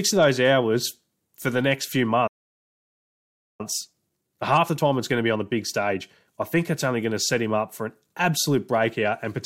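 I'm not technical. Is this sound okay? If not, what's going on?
No. At 2.27 s the speech stops dead for about 1.3 seconds, until 3.61 s. This playback stall likely happened because the player ran short of data.

From 3.61 s to 6.61 s you hear time-compressed catch-up. The speech runs about 1.1 times faster at normal pitch while the player makes up lost time.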